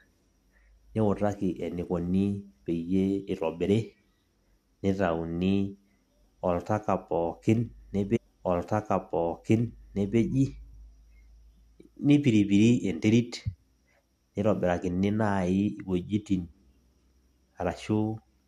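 At 8.15 s a stream segment is repeated: the player queued the same chunk twice, so about 2.0 s of speech plays again through 10.17 s. A small blip marks the jump back where the duplicate segment begins.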